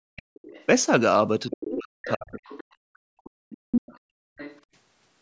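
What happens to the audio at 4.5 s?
From 4.37 to 4.61 s a second voice sits roughly 20 dB under the speech. This is the other side's voice leaking through, likely loudspeaker audio the echo canceller left in the microphone signal. Unlike room reverberation, it is a different voice, not a delayed copy of the talker.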